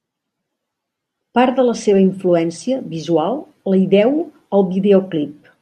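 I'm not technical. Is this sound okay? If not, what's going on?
Yes, nothing in the recording signal itself stands out as a technical problem.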